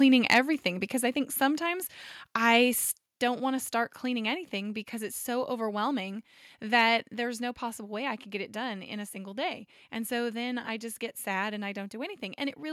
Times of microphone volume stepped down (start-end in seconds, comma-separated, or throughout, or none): 3.06